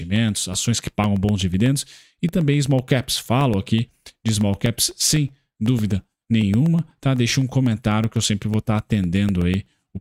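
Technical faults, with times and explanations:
0.16–9.91 s: periodic USB or driver dropouts. About 1 ms is silenced every 0.125 s, causing even ticks; the waveform shows tiny flat gaps, and the spectrogram shows thin broadband vertical lines.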